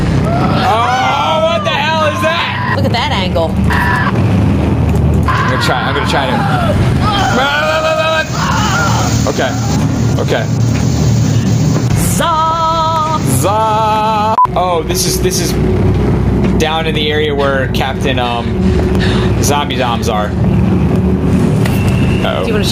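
Gain pumping runs throughout. The gain swings about 10 dB, ducking under loud sounds. Excess gain feeding a fast limiter is the likely cause.

From 0.98 s to 21.95 s, periodic USB or driver dropouts tick once per second. Each loses about half a millisecond to silence, about twenty in all.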